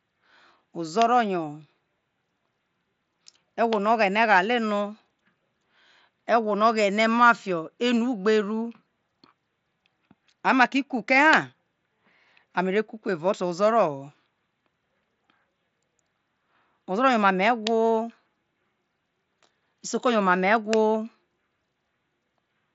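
Nothing goes wrong anywhere in this speech recording; it just sounds like a Bluetooth mSBC headset link doing its usual job, with the top end stopping at about 7.7 kHz and a little light grain from the codec on the louder bits.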